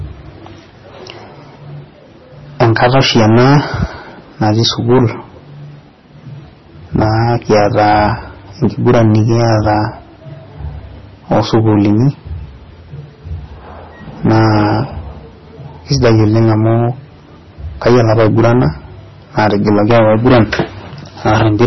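Speech runs the whole way under hard clipping: peaks were driven about 16 dB past what the signal path could pass, so around 7 percent of the waveform is sliced flat. That gives a harsh fuzz on every loud syllable rather than the occasional crackle of a light overload. Over the same span the audio is heavily smeared and watery, with attacks blurred and nothing above 5.9 kHz. This is likely MP3 compression at a rate that points to about 24 kbps. Unlike plain low-pass filtering, it also makes detail swirl on and off.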